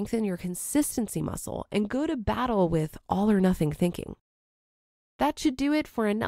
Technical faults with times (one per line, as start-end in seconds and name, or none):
1.60-3.51 channel delay (comb filtering)